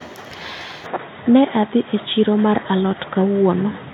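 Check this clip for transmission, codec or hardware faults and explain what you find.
The recording input likely switched to a poorer device at 0.87 s, and the lower-quality path holds through to the end. Its narrower band cuts everything above 3.8 kHz, so the speech turns dull and boxy, with a faint new noise floor but no gap or level jump.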